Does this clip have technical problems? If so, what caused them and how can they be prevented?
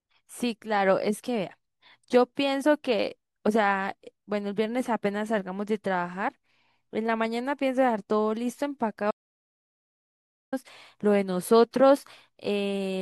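Yes. An audio dropout to silence runs from 9.11 to 10.52 s: the speech cuts to silence for 1.41 s, likely from a lost input link or brief mute. Securing connections and monitoring input levels during recording prevents this.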